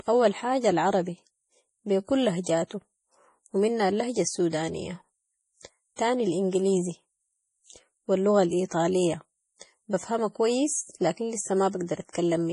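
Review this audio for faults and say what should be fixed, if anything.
Throughout the speech, the sound is watery and swirly, sibilants chirp metallically, consonant attacks smear, and nothing is heard above 10.5 kHz. That pattern is likely MP3 compression starved of bits, pointing to a rate around 32 kbps. The encoder has cut the treble at a fixed point and dropped weak frequency lines that flicker on and off between frames, so the damage is heavy. To prevent it, keep the source uncompressed or encode at a much higher bitrate.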